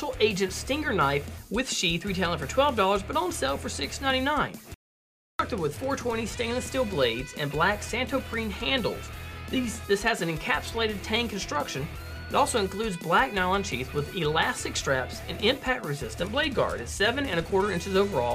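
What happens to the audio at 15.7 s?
Nothing goes wrong at 15.7 s; the audio there plays through intact, with no dropout, click, glitch or other technical fault.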